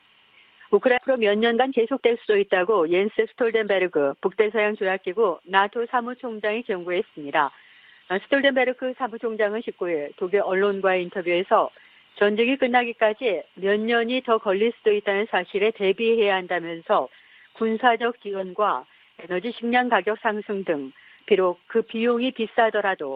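At 0.97 to 0.99 s a skip ahead occurs: about 0.7 s of audio is discarded, and playback jumps forward, butting the two sides together with no gap. From 1.08 to 3.33 s, jitter buffer speed-up trims short pitch-period slices to shed about 0.2 s of excess delay, so the sound runs 10% faster at unchanged pitch.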